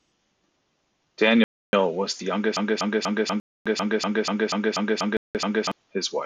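At 1.44 s the sound cuts to silence for 290 ms, resuming at 1.73 s where it left off. This is a Bluetooth stall. Interference likely delayed packets, so the headphone buffer emptied and playback waited for resent data.

From 2.57 s to 5.72 s a 243 ms fragment repeats exactly, eleven times back to back. This broken-record loop likely comes from a stalled player, encoder or stream resending its last chunk. The audio meant for that span is lost.

Two more Bluetooth stalls break into the loop. One runs from 3.40 to 3.66 s, silent for 256 ms. Another runs from 5.17 to 5.35 s, silent for 180 ms. Both are likely the same buffer underrun.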